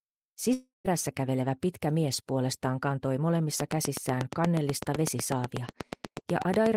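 A long network dropout runs from 0.53 to 0.87 s: the sound smears into a fading buzz as the receiver extends the last audio, then drops to silence for about 0.15 s, and resumes with roughly 0.32 s missing, most likely because packets stopped arriving.

A train of clicks starts at 3.60 s and lasts to the end, a regular ticking at about 8.2 per second, peaking about 15 dB above the audio. It is likely interference from nearby equipment or a faulty connection or power supply injecting near-identical pulses.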